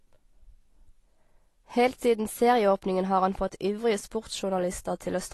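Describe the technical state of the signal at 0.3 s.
At 0.3 s the speech carries AAC compression damage, present across the whole clip rather than at this moment alone. The sound is dull and smeared, with a fizzy, warbling edge on sibilants, likely from AAC-LC coding at a low bitrate, about 32 kbps. On a spectrogram, energy stops sharply at 12 kHz, with patchy holes or noise-filled bands and blocky, time-smeared textures below it; the waveform itself shows no obvious break.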